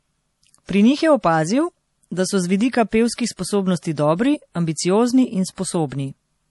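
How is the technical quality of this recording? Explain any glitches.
The technical quality is poor, with one fault running through the whole clip. The speech carries plainly audible MP3 compression artefacts from start to finish. Nothing is present above 11.5 kHz, so the treble is cut off sharply. The likely cause is an MP3 encode starved of bits, which fits a low bitrate around 48 kbps. The encoder dropped the top band and zeroed weaker frequency lines. Those lines flicker on and off between frames. The result sounds watery and swirly, and consonant attacks smear.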